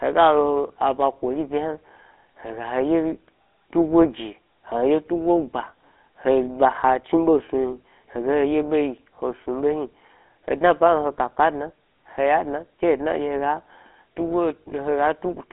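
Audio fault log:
throughout, GSM full-rate codec: speech is coded as a vocal-tract model fed by sparse regular pulses, fitting a 13 kbps GSM link, giving buzzy, gravelly roughness and nothing above 3.8 kHz.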